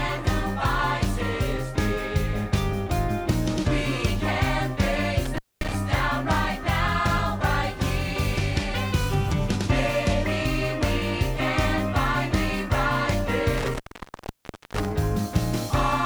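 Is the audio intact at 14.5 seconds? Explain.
No, 14.5 s falls right inside an intermittent contact fault running from about 13.58 to 14.92 s. It sounds like a loose cable or plug briefly losing its connection. The sound drops out for roughly 0.96 s, with a crackle as the contact breaks and again as it comes back. While the line is open you're left with just a faint hiss where the audio should be.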